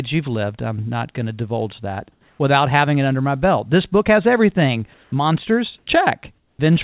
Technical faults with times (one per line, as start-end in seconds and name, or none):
2.12-2.39 comfort noise in place of the background
4.94-5.12 comfort noise in place of the background
5.78-5.87 comfort noise in place of the background
6.38-6.59 comfort noise in place of the background